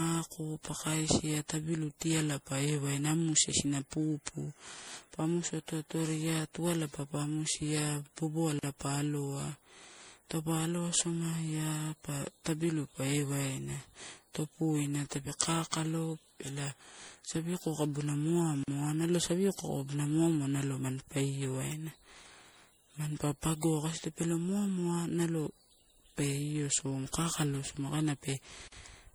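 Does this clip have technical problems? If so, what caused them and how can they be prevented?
Yes. The speech sounds swirly, smeared and hollow throughout, with blurred attacks, likely generation loss from repeated MP3 encoding at 64 kbit/s, around seven passes. Each pass re-quantises on a shifted frame grid, so the damage compounds. To prevent it, keep a lossless master and encode to MP3 only once, at the final stage.

Gaps between chunks occur at 8.59, 18.63 and 28.68 s, each a 44 ms silence recurring every 10 s at chunk boundaries. To prevent them, trim codec padding and schedule chunk playback gaplessly, so each chunk starts exactly where the previous one ends.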